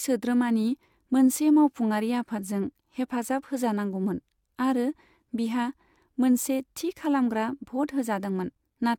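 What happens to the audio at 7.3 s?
At 7.3 s the speech carries generation loss, present through the whole clip rather than only at that moment: a swirly, hollow quality with softened consonant attacks. It is likely from lossy re-encoding repeated about three times, consistent with AAC at around 96 kbit/s, each pass adding fresh quantisation on a shifted frame grid. A spectrogram shows a flat ceiling at 17 kHz and smeared onsets. The waveform shows blurred transients.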